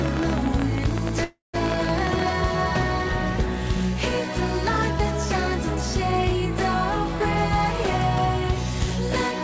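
From 0.06 to 2.23 s, irregular ticking and popping, about forty clicks at roughly 18 per second and well above the sound level, forms a train of clicks, likely from electrical interference or a faulty connection. From 1.24 to 1.56 s, a fading buzz that drops to silence for about 140 ms marks a call audio freeze: delayed packets likely emptied the jitter buffer, inserting a 296 ms gap without losing audio.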